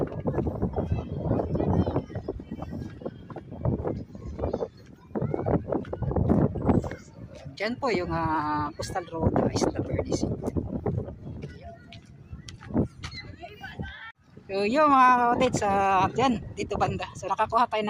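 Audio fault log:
No faults are heard anywhere in the audio.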